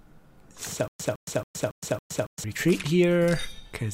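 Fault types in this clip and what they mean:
Stutter with silent gaps: From 0.88 to 2.44 s the same short burst of sound, about 160 ms long, plays five times. Each repeat is followed by about 117 ms of dead digital silence. The cycle runs at an even 277 ms pace. This likely comes from a stalled player or stream. At each retry it replayed the last fragment it held, then ran empty. The audio that belonged in that span never arrives.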